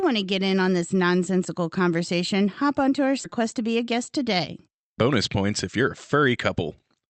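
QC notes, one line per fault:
3.23 s: skip ahead. Roughly 0.4 s of speech is missing, and playback jumps straight to later audio with no filler or gap. That stretch was dropped on the way or by the jitter buffer while newer audio was queued, so both sides butt together abruptly.
5.12 to 6.72 s: jitter buffer speed-up. Speech runs about 11% fast at unchanged pitch and sounds hurried. The buffer had built up extra delay, so it trimmed many tiny pitch-period slices, removing roughly a fifth of a second in total.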